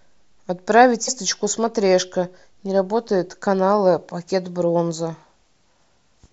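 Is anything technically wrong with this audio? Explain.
Yes. At about 1.07 s, compressed frames are skipped. Roughly 150 ms of speech goes missing, likely several dropped frames. The speech jumps ahead at the join.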